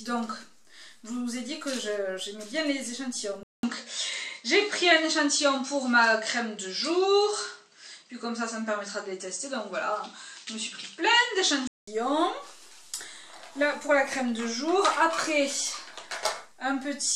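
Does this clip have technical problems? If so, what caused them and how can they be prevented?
Yes. From 3.43 to 11.87 s the sound goes dull, with nothing above 8.7 kHz, a shift in level, a faint new hiss, and a 200 ms gap at the change. That's likely the input switched to a poorer device. Pinning the input device in settings prevents it.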